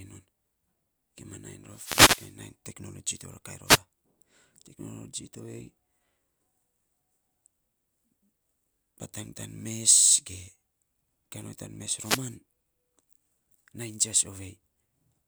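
The radio link from an analogue FM wireless microphone dips in strength, apparently as reflected paths cancel the direct signal, and each dip lets receiver noise rise through the speech. These wireless microphone noise hits sound like brief bursts of static or a swish. The first runs from 1.69 to 2.35 s, a shorter one from 3.66 to 3.79 s, and the last, just after "tan mes", from 11.96 to 12.25 s.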